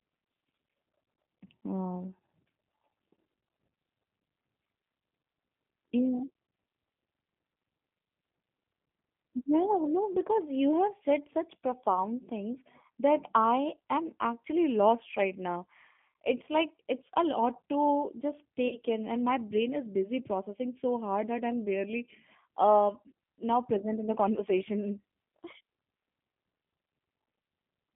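Throughout, the speech carries G.729 codec damage. The band runs only from about 150 Hz to 3.5 kHz, so it sounds thin. The coder rebuilds each frame from a filter, pitch and a few pulses. That leaves a plainly rough, synthetic edge, which fits an 8 kbit/s coder.

At 18.68 s, about 30 ms of audio goes missing, which points to a single lost packet. This is VoIP packet loss concealed by the speech codec. The decoder repeats its last pitch and filter and fades them. The result is a brief stretched smear that stays weak until 18.78 s, just before "in and my".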